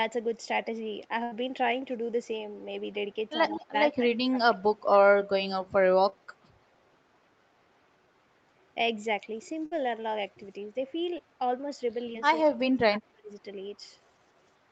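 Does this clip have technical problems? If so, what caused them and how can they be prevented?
Yes. The speech has four kinds of fault, heard through a call path whose content stops at 8 kHz.

Burst of packet loss, at 1.23–1.33 s and 9.66–9.73 s. Each time a run of packets arrived too late, the receiver stretched the last sound into a fading buzz or hiss, about 80 ms and 57 ms long, then jumped ahead, dropping 80 ms and 60 ms of speech. On a spectrogram the harmonics freeze into flat, dimming lines, then break abruptly. The waveform shows a smooth, decaying repeat of one pitch period. A larger jitter buffer and forward error correction would prevent this.

Echo leak, at 3.47–3.65 s. A faint copy of the speech sits about 161 ms behind the original, roughly 15 dB down, most likely because a loudspeaker's output reached its microphone and the echo canceller let some through. A spectrogram shows a weaker, thinner ghost of the same harmonic pattern shifted right by that delay. 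The waveform shows a small trailing bump after each syllable. Headsets or a better-tuned echo canceller on the loudspeaker side would prevent it.

Speech suppressed in double talk, at 3.95–5.08 s and 12.44–13.30 s. The level dips and chops, by about 25 dB at worst in the first stretch and about 35 dB in the second. Each stretch totals roughly 0.7 s of attenuated speech, likely because the echo canceller mistook simultaneous talk for echo and turned it down. The waveform envelope shows sudden notches, and the spectrogram shows patches that fade or lose their upper bands. Headsets, or an echo canceller that handles double talk better, would prevent it.

Short concealed packet loss, at 6.09–6.14 s, 11.17–11.20 s and 12.12–12.16 s. Each dropout removed 20 ms, which the decoder patched with about 21, 10 and 13 ms of extrapolated sound before blending back. The result is a brief smear or wobble. 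On a spectrogram it is a narrow blurred column where harmonics hold steady for an instant. The waveform shows a tiny repeated cycle at the seam. A steadier network path or Opus in-band forward error correction would prevent it.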